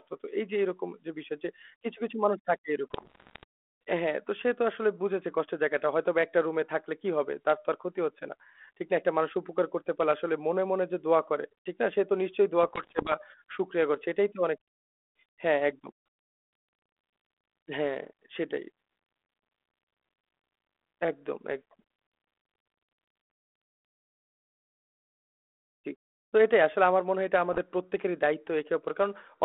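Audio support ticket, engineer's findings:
Bit errors on an ADPCM link: pops, rough bursts, level jumps at 2.91–3.44 s, 12.63–13.16 s, 27.53–27.59 s. Flipped bits upset the decoder's step size and predictor, so damage rings on briefly.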